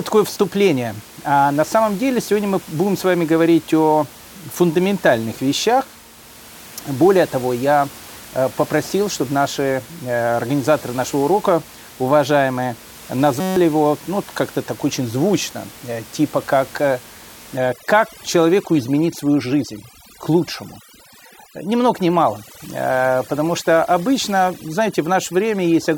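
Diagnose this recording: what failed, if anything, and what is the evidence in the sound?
System hang loop at the driver or buffer stage, 13.40 to 13.56 s, before "его ну". One 5.33 ms slice repeats, buzzing at 188 Hz. This fits a 256-sample buffer.

Overdone noise removal in call processing from 17.57 s, after "звучно э типа как". Background collapses to twinkling near-silence. Quiet parts of the voice are cut along with the bands near the noise estimate.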